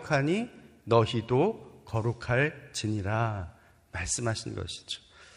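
From 3.30 s to the end of the speech, a Bluetooth SBC bit pool drop starves the upper sub-bands. The sound fits a bit pool falling from 31 to about 14, near 99 kbps. Treble dulls and gritty noise rises. A spectrogram shows the top band emptying and speckled mid-band noise.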